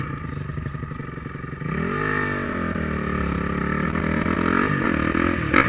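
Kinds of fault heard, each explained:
Short concealed packet loss: About 10 ms of audio arrived too late at 2.73 s. The receiver extended the preceding sound to fill it, leaving a brief smear.
Scattered short gaps: About ten small losses fall between 3.84 and 5.64 s, the longest near 20 ms. Each was patched by continuing the sound, causing brief hiccups.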